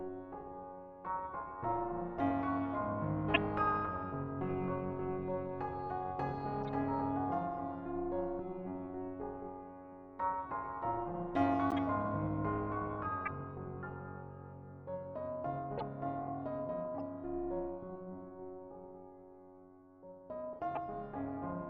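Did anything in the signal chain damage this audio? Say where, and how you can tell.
Yes. The whole clip carries a metallic buzz with extra tones around each note that never lets up, with the level rising and falling by about 11 dB at around 400 Hz. That is overlap-add ripple from a frame-based processing or codec stage. The signal was split into windowed frames and rebuilt with an overlap whose windows don't add to a steady gain, so the loudness sags and swells once per frame.

Layered on top are brief chirps and noisy blips at 3.34–3.37, 6.61–6.69, 11.70–11.79, 13.25–13.28, 15.77–15.83, 16.98–17.00 and 20.75–20.77 s. Each lasts only a few tens of milliseconds, the span of one to a few frames. These are corrupt frames decoded: flipped bits in the compressed stream during transmission or storage, which the decoder played anyway. The misread gains and codes put energy at the wrong frequencies for just those frames.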